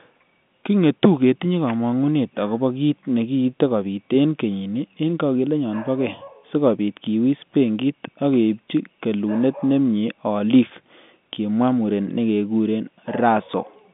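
No faults found; the speech sits in a standard telephone band of roughly 150 Hz to 3.6 kHz with nothing above 3.7 kHz, consistent with 64 kbps G.711 A-law coding.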